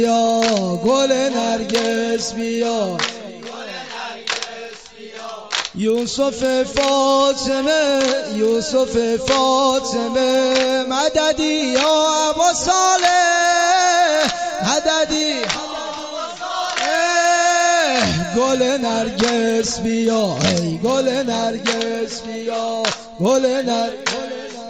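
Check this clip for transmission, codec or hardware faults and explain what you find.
One fault runs through the whole clip: the resampler restarted on every block. Each 50 ms block was converted separately, consistent with a 16 kHz to 48 kHz step, so every block edge carries a small error. The result is a steady tick at 20 Hz, heard as a buzz only while sound is present.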